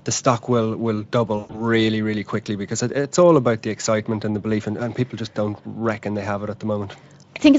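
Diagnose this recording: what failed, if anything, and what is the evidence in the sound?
The network stage failed. A burst of VoIP packet loss concealed by the speech codec hit between 1.37 and 1.62 s, just after "the stock will will" and before "really quickly because it". About 140 ms of audio went missing within a 160 ms stretch, with the longest gap at 120 ms, which fits roughly seven 20 ms frames. The Speex decoder, whose own coding leaves only light damage, filled the hole by extending its last pitch and filter at falling gain. That gives a stretched, buzzy tone or coloured noise that fades, and the sound stays weak for a moment after packets resume.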